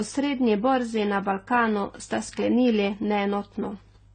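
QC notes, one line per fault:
Throughout, transcoding between lossy codecs: nothing above 9 kHz, and two distinct kinds of coding damage at once, a swirly, synthetic high-band sheen over a coarser, grainy smearing, rather than a single codec's one signature; likely a low-rate HE-AAC encode re-encoded as AAC-LC near 32 kbit/s.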